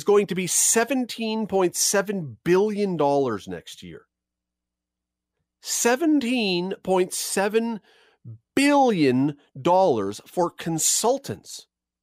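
No technical faults can be heard anywhere in this recording.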